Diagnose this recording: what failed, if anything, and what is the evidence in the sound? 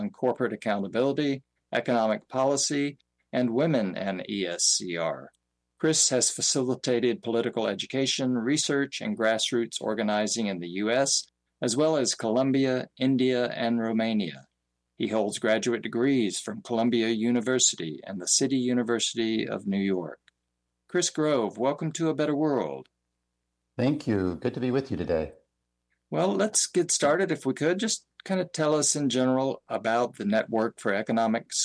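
Nothing in the recording stood out as a fault on listening.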